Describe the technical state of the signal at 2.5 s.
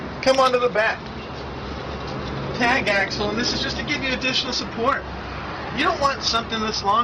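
At 2.5 s the signal is intact, with no audible fault at that moment.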